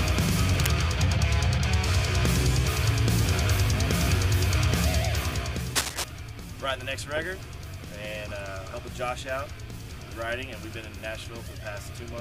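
Cable scratch noise turns up twice: a brief rustle from 0.52 to 0.69 s, around 10 dB under the sound, then a harsher scratch from 5.75 to 6.04 s at roughly the sound's own level. Likely a worn cable or connector being moved, its contact flickering.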